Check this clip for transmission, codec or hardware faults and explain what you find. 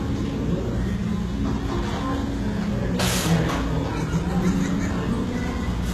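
One codec fault runs through the whole clip. The audio sounds like it has likely been through HE-AAC compression at a very low bitrate, around 16 kbps. The upper band is rebuilt from copied lower bands, so the treble comes out gritty and metallic, and its harmonics don't line up. A spectrogram shows blocky, repeated texture up to a hard ceiling at 12.3 kHz, with nothing above it.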